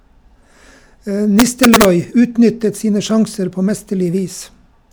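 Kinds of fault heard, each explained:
Integer overflow: Between about 1.40 and 1.85 s, just before "utnyttet sine sjanser på", the loudest speech peaks are driven about 3 dB past the integer limit and, instead of being held at full scale, wrap around to the opposite extreme. Each overshooting peak jumps across the entire range, producing violent, snapping cracks. Clipping would only flatten the tops into a buzzy, gritty distortion. Here the sign flips, so the cracks are far sharper and more explosive.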